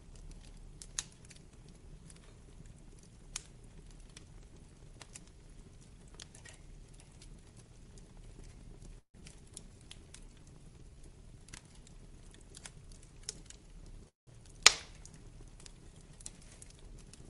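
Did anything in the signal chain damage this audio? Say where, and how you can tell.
Yes. Between 8.99 and 9.23 s there is a long network dropout, likely caused by lost packets. The last sound is stretched into a fading fill for about 215 ms, including about 90 ms of silence. About 100 ms of audio never returns, and the timeline shifts by around 50 ms.

The jitter buffer then slows down from 9.69 to 10.96 s. Playback drops to 92% speed with the pitch unchanged, and drawn-out sound adds 107 ms. The buffer is repeating single pitch periods and pause fragments to rebuild its reserve.

There is a jitter buffer speed-up from 13.33 to 14.03 s at 107% speed, and another from 16.23 to 17.22 s at 105%. The sound is hurried but the pitch is unchanged. Each pass trims around 50 ms by cutting short pitch-period pieces to reduce excess buffered delay.

At 14.08 to 14.29 s a call audio freeze appears, likely caused by packets held up in transit. 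The buffer ran empty and filled 186 ms with a decaying continuation, 160 ms of it silent. Playback then resumes where it stopped, losing nothing but shifting everything after it by 186 ms.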